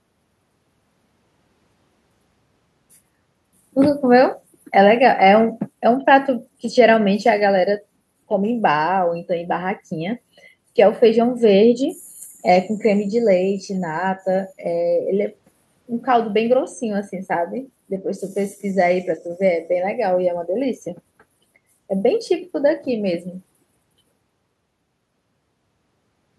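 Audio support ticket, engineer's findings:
No faults found in clip.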